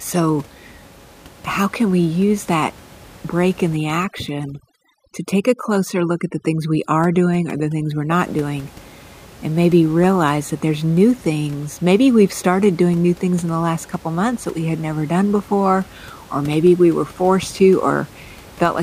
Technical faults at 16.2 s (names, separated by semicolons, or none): none